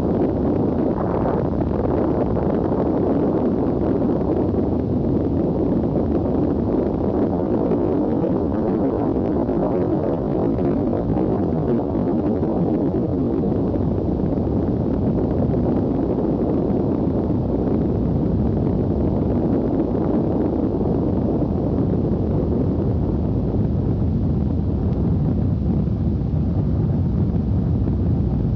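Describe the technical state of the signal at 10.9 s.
A time-stretched section runs from 7.26 to 13.50 s, and 10.9 s falls inside it. Pace slows abruptly to 0.56 times normal while pitch holds, giving a dragging sound, likely from software lengthening the audio by repeating short slices of it.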